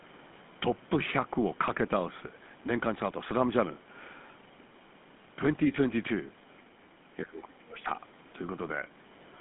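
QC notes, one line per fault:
Throughout: GSM full-rate codec. The speech has the gravelly, buzzy roughness of the original GSM coder, plainly audible across the whole clip. Running at 13 kbps, it rebuilds the voice from a vocal-tract model excited by regularly spaced pulses, which puts that grain on every sound. Nothing is passed above 3.8 kHz, and the line band of 150 Hz to 3.5 kHz removes low warmth and upper presence, giving a narrow, telephone-like sound.
6.87–6.94 s: background gated by the echo canceller. For about 70 ms the room sound behind the talker dips by about 6 dB and then comes back. The echo canceller has briefly turned the microphone path down while the far end's loudspeaker signal was active, taking the ambient floor down with it. Because the gate releases quickly, the dip is heard as a short hollow gap in the background.
7.22–7.9 s: speech suppressed in double talk. 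The near talker's voice is pushed down hard over roughly 0.7 s, dropping by around 25 dB at its deepest. This most likely happened because both ends were talking at once and the echo canceller could not separate the local voice from loudspeaker echo, so it attenuated everything picked up by the microphone until the overlap ended.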